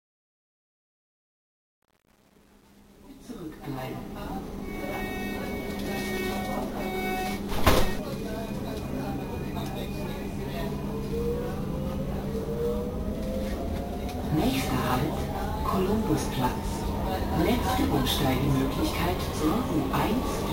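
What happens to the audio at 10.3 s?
At 10.3 s the audio is intact, with no dropout, click, distortion or level change.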